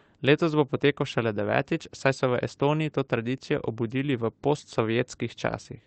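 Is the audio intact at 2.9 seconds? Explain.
Yes, the speech at 2.9 seconds is intact, with no dropout, glitch or distortion, only the call codec's ordinary coding and its band limit at about 8 kHz.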